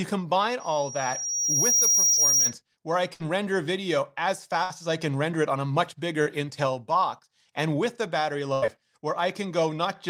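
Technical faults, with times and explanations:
0.60–2.56 s, loudspeaker feedback squeal: A thin tone at 5.7 kHz creeps in and swells over roughly a second until it sits about 5 dB above the speech. It dies away just before "where I". The mic was picking up the speaker it feeds, and at 5.7 kHz the round trip gained more than it lost, so that one frequency kept feeding itself and grew into a whistle.
2.13–2.19 s and 6.22–6.28 s, short concealed packet loss: In each spot about 40 ms of audio never arrived in time, and the receiver papered over the hole with roughly 40 ms of invented sound. It did that by carrying on the last pitch, or shaped noise if the sound was unvoiced, then blending back in. You hear a quick smear or wobble rather than a clean gap, and the first one lands under the tail of the squeal.
3.13–3.22 s, 4.64–4.72 s and 8.54–8.64 s, burst of packet loss: These are longer holes, 60 ms at the first two and 80 ms at the last. 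The concealment stretches the last sound out and fades it, giving a held buzz or a dying hiss, and then the audio jumps ahead with that stretch simply missing. The first falls right after "where I" and before "render video as", and the second comes after "render video as" and before "as I can render".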